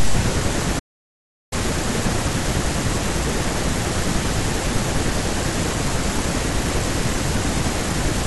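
A playback stall runs from 0.79 s to 1.53 s, cutting the speech off mid-flow and leaving roughly three quarters of a second of dead silence before the talker resumes. The gap is abrupt at both edges, with no fade, which points to the output simply having nothing to play. The likely cause is the player's buffer running dry or its audio thread being held up, so the device starved until data arrived again.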